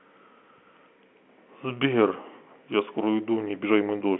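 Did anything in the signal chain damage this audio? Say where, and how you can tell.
No, nothing in the chain has damaged this speech; what you hear is ordinary telephone-line coding, which sounds like G.711 A-law at 64 kbps, with the sound held to roughly the 200 to 3400 Hz line band and nothing above about 3.8 kHz.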